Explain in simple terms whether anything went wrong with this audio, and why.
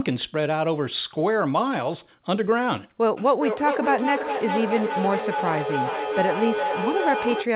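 Something goes wrong from about 3.17 s to the end at 7.56 s: a feedback echo between two devices. Two devices on the same call sit in one room. One plays the other's sound aloud, and that microphone hears it again. Each echo canceller only removes its own device's output, so the speech comes back roughly every 0.4 s, thinner and more ringing. The repeats get nearly as loud as the speech itself, piling up instead of fading.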